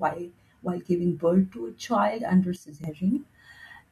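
A speech recording with a sudden gain jump: right after "to a child under", from 2.56 to 2.84 s, the voice and background noise drop together by about 10 dB, then snap back. This is likely an unramped gain change. The waveform shows a sharp-edged step, and the spectrogram shows a dimmer band with vertical edges.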